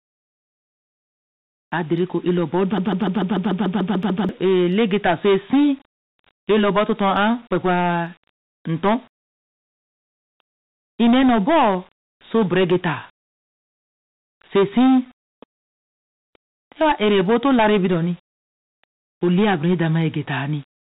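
Speech recorded through a narrowband call path, with nothing above 4 kHz, which fits G.711 mu-law at 64 kbps. Hard clipping runs through the whole clip. The signal is driven about 13 dB past what the chain can pass, so the peaks are cut flat on roughly one sample in twenty. Those squared-off tops generate high harmonics, heard as a harsh fuzz riding on every loud syllable rather than occasional crackle. From 2.78 s to 4.29 s there is a broken-record loop: a 147 ms fragment repeats back to back ten times, giving a stuttering, machine-gun texture. The likely cause is a stall in the player, encoder or stream that kept resending the last buffered fragment. The audio that should have filled those 1.5 seconds is missing.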